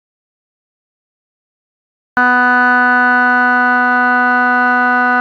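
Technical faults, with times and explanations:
0.00 to 2.17 s, audio dropout to silence: the music is absent from the start, silent with no room tone, likely a lost input or mute while recording continued.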